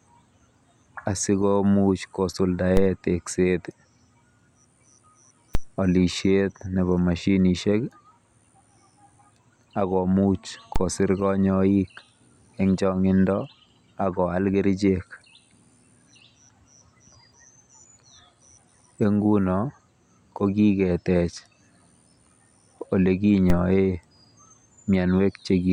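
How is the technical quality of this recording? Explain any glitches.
The speech is marred by four DC steps, at 2.77, 5.55, 10.76 and 23.50 s. Each time, the waveform's zero line suddenly jumps by about -10 to -11 dBFS. The offset then decays away, as a 5 Hz high-pass would drain it. Every jump comes through as a low thump beneath the unchanged speech.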